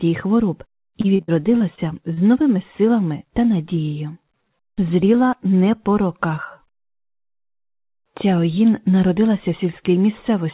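From 1.01 to 2.19 s, repeated packet loss hits the stream: seven separate holes open in quick succession, the longest about 61 ms, and the receiver bridges each one by stretching out the last stretch of sound it had. Roughly a fifth of that span is concealment rather than real audio, so the passage turns choppy and robotic, with small pieces missing, heard through the narrow band that stops at 4 kHz.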